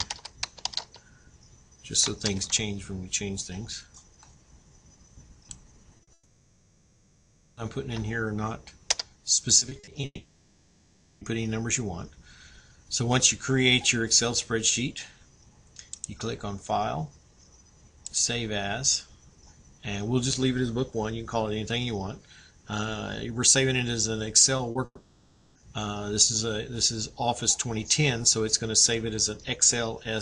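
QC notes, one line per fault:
5.97 s and 6.03 s, short concealed packet loss: 20 ms then 40 ms of audio arrived too late, so the receiver extended the preceding sound, leaving brief smears.
6.13 to 7.59 s, long network dropout: a likely network outage cost 1.44 s of audio; the receiver stretched the last sound into a fading buzz or hiss, and the audio resumes with that section gone.
9.59 to 10.05 s, repeated packet loss (robotic sound): five losses of up to 40 ms, 120 ms in all, were each patched by continuing the previous sound, giving choppy, broken audio over about a quarter of the span.
10.05 to 11.23 s, long network dropout: 1.16 s likely never arrived; the concealment fades out and ends in about 40 ms of silence before audio returns without the missing section.
24.57 s and 24.71 s, short concealed packet loss: losses of 20 ms and 40 ms were filled by continuing the preceding sound, so each is a brief smear or wobble.
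24.85 to 25.57 s, long network dropout: 0.70 s was likely lost; the concealment fades, ends in about 40 ms of silence, and the audio resumes with that section missing.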